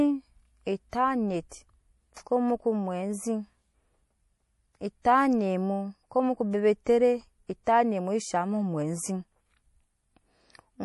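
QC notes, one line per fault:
throughout: MP3 compression. Nothing is heard above 11.5 kHz. The sound is plainly watery and swirly, and s sounds chirp and smear. The likely cause is MP3 coding at a low bitrate, which fits around 48 kbps, cutting the treble and dropping weak detail from frame to frame.
2.14–2.17 s: pre-echo. A hiss of about 26 ms comes just before "ko moko" and softens its attack. The codec spread noise sized for that loud onset across its whole block. So it also filled the quiet moment before the attack.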